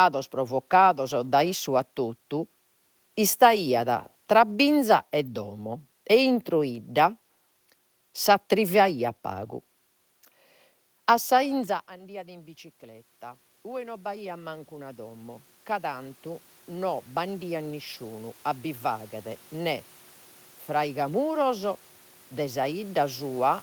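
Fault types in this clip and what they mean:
Automatic gain rising: the talker drops back around 11.5 s, so the level falls by about 19 dB. From 11.96 s to 23.47 s the gain control slowly climbs about 17 dB to compensate, and voice and room noise swell up together.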